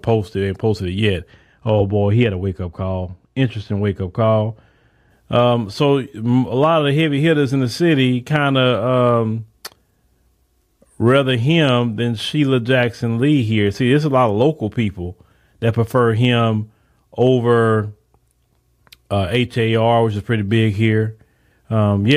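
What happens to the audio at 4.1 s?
At 4.1 s you're inside a stretch of wrongly applied de-emphasis, from 1.30 to 5.10 s. A treble cut meant to undo pre-emphasis tilts the top down, about 10 dB at 10 kHz, so the speech sounds dull and muffled.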